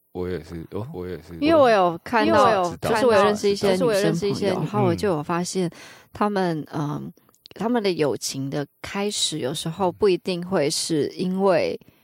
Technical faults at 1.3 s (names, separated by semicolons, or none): doubled audio track